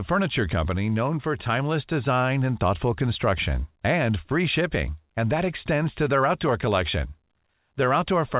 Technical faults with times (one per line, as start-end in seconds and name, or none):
none